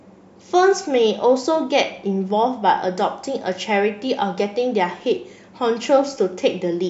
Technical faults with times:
none

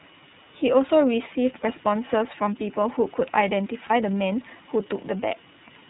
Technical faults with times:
0.00-5.90 iLBC codec
3.87-3.91 lost iLBC frames

